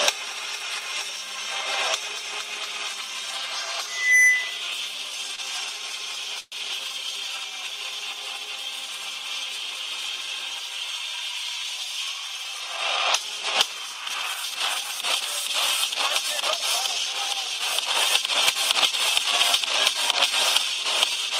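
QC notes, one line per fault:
3.87 to 4.65 s, loudspeaker feedback squeal: a single 2 kHz tone swells over about a third of a second to about 10 dB above the programme, because the microphone is hearing its own loudspeaker. Unlike a steady interference whine, it grows by itself and then stops.
5.35 to 5.41 s, short stall from a late packet: the sound is held about 28 ms too long while the receiver waits for a tardy packet, then resumes at the same point. Nothing is lost.
6.40 to 6.55 s, call audio freeze: the sound hangs for 116 ms as it fades, ending in roughly 20 ms of silence, then resumes without skipping anything. This was likely held-up packets draining the jitter buffer. It is longer than the stall and has a true silent tail.
11.70 to 12.58 s, jitter buffer speed-up: the audio runs 9% fast at unchanged pitch as the receiver trims short pitch-period slices, about a tenth of a second in total, to shed built-up delay. 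The result sounds hurried rather than higher, which separates it from a resampling error.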